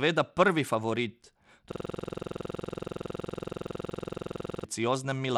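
Across the whole speech clip the top end sounds thin and unsteady, with treble that flickers in and out and a gritty, granular haze on the sound. This is likely Bluetooth SBC compression at a small bit pool, consistent with a low rate of around 96 kbps. The codec splits the signal into a few wide sub-bands and starves the weak upper ones of bits, while the remaining bands are quantised coarsely enough to leave audible grit and aliasing.

From 1.72 s to 4.64 s, right after "prvi favorit", the sound is replaced by a harsh, buzzing stutter repeating at 21.5 Hz. This is a system hang loop. The software froze while the audio hardware kept replaying the same 46.44 ms stretch of its ring buffer, which fits a 2048-sample buffer. That fragment cycles some sixty times before normal playback returns.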